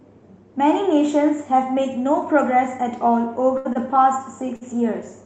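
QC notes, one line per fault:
3.57 to 3.67 s, 3.73 to 3.77 s and 4.56 to 4.63 s, short stall from a late packet: each time a packet arrived late and the jitter buffer ran dry, so the receiver stretched the last sound for 75, 21 and 54 ms until it came, then resumed where it left off. Nothing drops out, but the sound hangs with a faint buzz or dip, and playback runs later by each gap.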